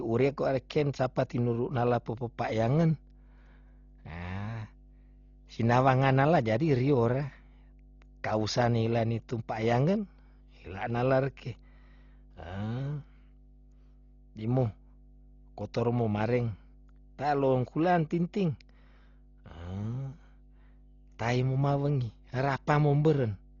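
From start to finish, mains hum sits under the speech: a steady 50 Hz tone with some low harmonics, leaking in from the power line through a ground loop or nearby transformer. It is roughly 25 dB below the speech. On a spectrogram it is an unbroken horizontal line at 50 Hz with weaker lines stacked above it.

Throughout, the speech also sounds dull and rough, with a fluttering, grainy noise clinging to voiced sounds, most likely from heavy Dolby Digital compression at a very low bitrate, consistent with about 32 kbps. Everything above 7 kHz is cut away, and many frequency lines are filled with dither noise instead of real detail. A spectrogram shows a hard ceiling at 7 kHz and speckled, blocky texture around the harmonics.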